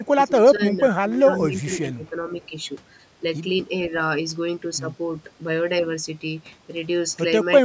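From 0.05 to 2.15 s, the speech dips and breaks up in pieces. Across roughly a second and a half of that span, it is pushed down, at its deepest by around 20 dB. This pattern is likely speech suppressed in double talk. The far side was talking at the same moment. The echo canceller could not tell the near talker from the loudspeaker echo, so it turned both down. The band stops at 8 kHz.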